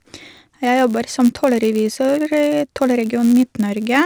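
From start to finish, the speech carries a filter restarted on every block fault. The filter's memory is cleared at each block boundary, so every block begins from silence with a small transient. The result is a rough buzz at about 93.8 Hz, which fits a 512-sample block, and it grows and fades with the speech level. A spectrogram shows evenly spaced faint vertical lines, and the waveform shows tiny spikes at regular intervals.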